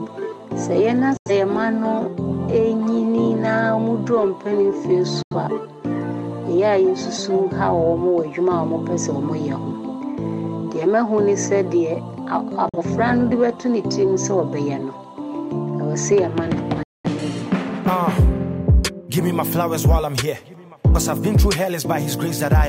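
Four digital broadcast dropouts break the sound, at 1.17–1.31 s, 5.22–5.36 s, 12.69–12.79 s and 16.83–17.09 s. The receiver lost valid frames and muted until good ones arrived, so the sound snaps to silence through a fade of about 3 ms and resumes later. About 85, 85, 43 and 213 ms of programme are lost, which fits two, two, one and five dropped frames. On a waveform or spectrogram, each appears as a clean, full-band blank gap with abrupt edges.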